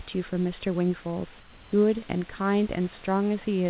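Comfort noise in place of the background runs from 1.40 to 1.72 s, a gap of about 320 ms where the real room noise, sitting about 26 dB below the speech, gives way to a steady, featureless hiss roughly 2 dB quieter. This is likely discontinuous transmission: with no speech detected, the sender goes silent and the receiver synthesises smoothed noise to fill the pause. The switch shows as a flattening of the background's texture until the speech resumes, all within narrowband call audio carrying nothing above 4 kHz.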